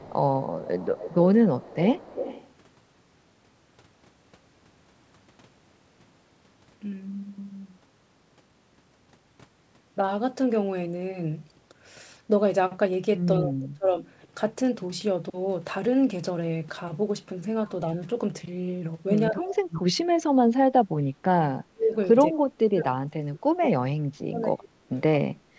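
From 0 to 2.51 s a faint second copy of the speech trails the original by about 0.2 s, sitting roughly 15 dB below it. This is an echo leak, likely from a far-end loudspeaker whose echo canceller let part of the microphone pickup slip back into the call.

At 13.42 to 13.98 s and again at 19.3 to 19.82 s, the speech sinks abruptly for about half a second, dropping by some 25 to 30 dB. From 20.45 s to the end it is pushed down deeper still, around 35 dB at worst. This is speech suppressed in double talk: with both sides active, the echo canceller likely could not tell the talker from loudspeaker echo and attenuated everything.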